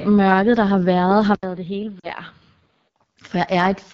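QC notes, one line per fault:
Throughout: AMR wideband (HD Voice) codec. The speech is coded at a rate that points to 8.85 kbit/s, one of the lowest wideband modes, so the pulse-driven vocal tract model has too few bits and the speech comes out plainly rough and raspy, with a noisy, synthetic top above 6.4 kHz.
1.35 to 2.96 s: input switched to a poorer device, likely a different microphone or a headset call profile. Just after "der har været har" the sound drops out for about 80 ms, then returns about 10 dB quieter and duller, with nothing above 5 kHz and new background noise about 35 dB under the speech.
2.00 to 2.09 s: lost AMR speech frames. Radio errors corrupted a run of frames spanning 40 ms, which fits two lost frames. The decoder stretched the last good pitch and vocal tract settings at falling gain, so the speech sags to near silence before resuming rough for a moment.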